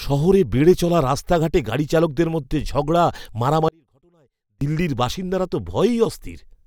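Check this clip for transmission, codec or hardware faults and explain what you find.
One fault is present, an audio dropout to a faint residue, from 3.69 to 4.61 s. The speech cuts out abruptly for about 0.93 s, leaving only a faint leak far below normal level before it resumes at "দিল্লির বাসিন্দারা তো". The likely cause is a brief loss of the wanted signal while the downstream path stayed live.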